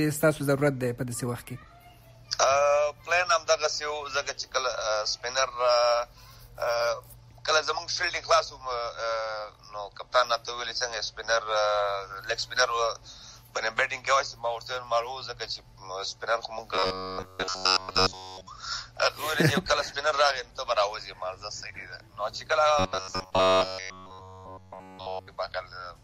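From 16.75 to 18.47 s, and again from 22.79 to 25.28 s, the sound becomes a rigid metallic buzz at 93.8 Hz, through most of the first span and all of the second. This is robotic sound from repeated short buffers, likely a looped 10.7 ms chunk filling for audio that arrived too late.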